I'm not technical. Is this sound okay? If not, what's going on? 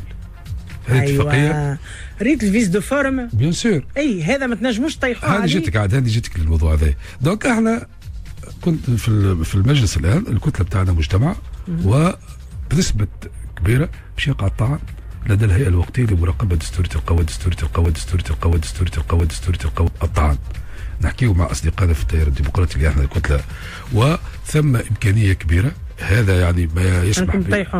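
No. There's a broken-record loop from 17.18 to 19.87 s: a 0.67-second fragment plays four times back to back. The player or stream likely stalled and kept replaying the last piece it held, so whatever should have played there is missing.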